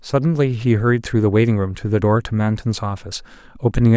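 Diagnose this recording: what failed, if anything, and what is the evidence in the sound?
Nothing failed in this recording, and the sound offers no evidence of any fault.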